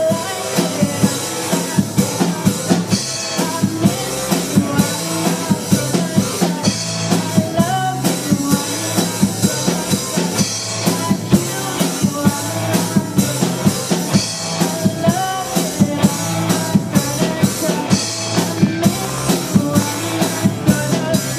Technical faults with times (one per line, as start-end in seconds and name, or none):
18.27-20.42 train of clicks